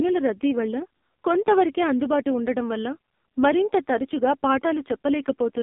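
Speech squeezed through the AMR narrowband mobile codec the whole way through. The line band runs from roughly 200 Hz to 3.6 kHz, and nothing survives above 3.7 kHz, so it has that flat phone-call sound. The codec damage is heavy. The voice comes out buzzy and synthetic because the vocal-tract model is being fed too few pulses per frame, which fits one of the low AMR-NB modes, around 5.9 kbps.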